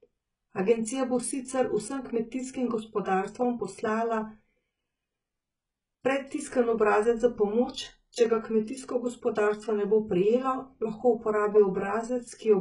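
Speech runs through the whole clip with heavy coding damage that points to HE-AAC compression at a very low bitrate, consistent with roughly 12 kbps. The upper band is filled rather than dull, but it sounds synthetic: s sounds come out gritty and lispy, with a metallic sheen that doesn't match the harmonics below it, and nothing at all sits above about 11.1 kHz. That replicated, misaligned treble is what separates likely spectral band replication from an ordinary low-pass or plain AAC, which would simply sound muffled.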